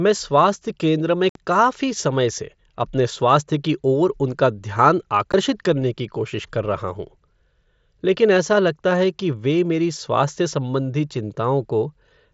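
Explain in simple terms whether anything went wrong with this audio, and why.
Unconcealed Bluetooth headset packet loss: the speech packets between headset and phone went missing twice, leaving abrupt silent holes. The first lasts 60 ms, from 1.29 to 1.36 s, after "स्वास्थ्य केंद्र में". The second is a 15 ms blip at 5.32 s, just before "करने की कोशिश कर".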